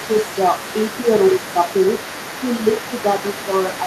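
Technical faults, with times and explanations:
Throughout, other side's voice leaking through: a second, fainter voice sits roughly 15 dB under the main speech for the whole clip, likely because the echo canceller left some loudspeaker playback in the microphone. A spectrogram shows overlapping harmonic striations that don't match the main talker's pitch.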